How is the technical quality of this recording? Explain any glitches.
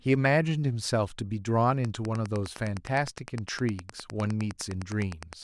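From 1.83 s to the end, a steady ticking runs underneath the speech at about ten clicks per second, sitting roughly 20 dB below the voice. It is Wi-Fi interference. A Wi-Fi radio near the recording circuit sends a beacon every 102.4 ms, and the audio electronics rectify each radio burst into a small audible pulse. The result is this regular, machine-like tick that keeps going on its own, unaffected by what the speaker is doing.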